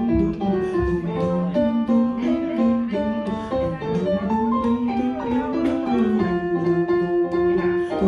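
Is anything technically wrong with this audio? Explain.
No, nothing technically wrong stood out on listening to this audio.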